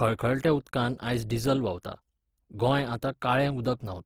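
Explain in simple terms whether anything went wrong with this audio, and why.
The speech sounds grainy and rough from start to finish, with a clearly noisy texture. This is likely Opus compression squeezing the sound too hard and filling in lost detail with noise.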